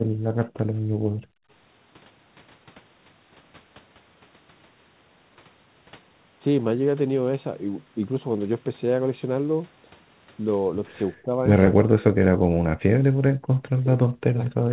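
Speech, band-limited to 4 kHz in a way that fits a narrowband G.711 A-law call path, with three echo-canceller faults. Background gated by the echo canceller: the room sound drops out at 0.0 to 0.12 s (about 24 dB down), 0.9 to 1.51 s (about 33 dB) and 13.28 to 13.55 s (about 40 dB). In each case the canceller pulls the microphone level down hard while the loudspeaker plays, then releases it. Speech suppressed in double talk: the talker dips by roughly 15 dB at 0.4 to 0.62 s, about 20 dB at 11.22 to 11.36 s, and around 40 dB from 11.72 to 13.0 s and from 13.83 s to the end. This is likely because the canceller cannot separate the near talker from the far-end echo and attenuates both. Echo leak: at 14.45 to 14.5 s a brief copy of the speech returns 234 ms late, around 30 dB below the direct level. This is likely residual loudspeaker pickup that the canceller failed to remove.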